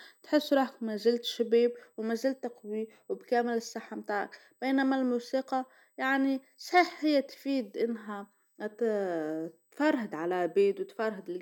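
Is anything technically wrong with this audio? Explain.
Yes. Throughout the speech runs a thin, steady high-pitched whine at a fixed 8 kHz, loudest at its harmonic of 16 kHz and sitting around 40 dB below the voice, so it is faint but constant and easiest to hear in pauses. This is USB whine: the bus draws current in 125 microsecond microframes, and that 8 kHz pulsing leaks into the audio path through shared power or ground, leaving a pure tone and its multiples.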